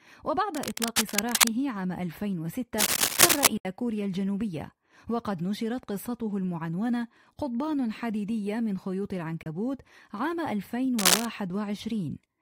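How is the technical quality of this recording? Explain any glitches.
The recording has two kinds of glitch. There are three bursts of scratching and two short gaps in the sound.

Cable scratch noise occurs from 0.55 to 1.50 s, from 2.79 to 3.47 s, and from 10.98 to 11.26 s. Harsh, uneven rustling sits over the speech. In the first burst it is about as loud as the speech. The later two are a little louder. The likely cause is a worn cable or connector being moved. Its contact resistance jumps about quickly and adds ragged noise.

Bluetooth dropout occurs from 3.57 to 3.65 s and from 9.43 to 9.46 s. The sound cuts out for 72.6 ms and then 29.0 ms. It returns as if it had kept playing, so a small piece of the speech is simply missing. The likely cause is wireless audio packets arriving too late for the headphones and being discarded. The longer gap fits a handful of lost packets and the shorter one fits a couple.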